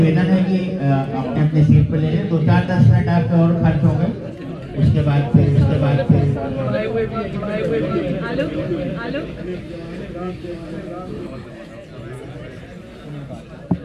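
From 5.55 s to 11.27 s the audio carries a doubled audio track. A second, full-band copy of the same sound runs about 0.7 s behind the first, at roughly equal loudness. It has no decay and no room colour. Everything is heard twice, out of step, and the copy cuts in and out abruptly at those edges. The likely cause is a second capture path feeding the same sound in late.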